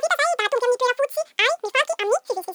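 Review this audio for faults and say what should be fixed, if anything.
Audio read two samples at a time (double speed), throughout the clip: the speech plays back twice as fast and a full octave, 12 semitones, higher. The reader is treating each pair of samples as one frame, as if the stream had two channels or samples twice as wide, so twice as much data is consumed per step. Strong content above a quarter of the sample rate folds back. Prevent this by matching the reader's channel count and sample width to the file's actual format.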